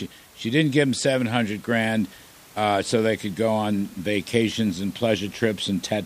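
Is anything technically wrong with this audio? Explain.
No, nothing technical is wrong with this speech recording; the only background is the room's own ambient noise, sitting about 26 dB below the speech as part of the recorded environment.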